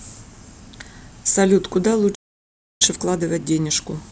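A playback stall runs from 2.14 s to 2.82 s. The speech stops in mid-flow and the output goes completely silent for about 0.66 s before resuming. The player most likely ran short of buffered data, or its output thread was held up, so nothing reached the output until it recovered. The gap sounds like an abrupt dropout rather than a natural pause, because the sound is cut off without any decay.

Time-compressed catch-up follows from 2.82 s to the end of the clip. Having fallen behind during the silence, the player works through its backlog by removing short slices of audio and cross-fading across each join, so the speech plays at about 1.15 times normal speed. The pitch stays where it was, but delivery sounds hurried.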